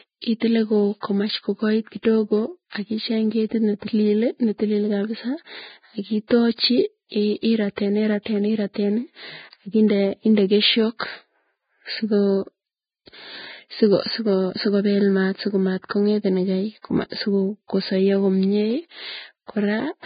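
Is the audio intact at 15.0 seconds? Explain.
No. At 15.0 seconds, as throughout the speech, the sound is hissy and grainy, with nothing above about 4.9 kHz. This is likely heavy Vorbis compression at a low bitrate near 15 kbps. The treble is cut, and fine detail is replaced by noise.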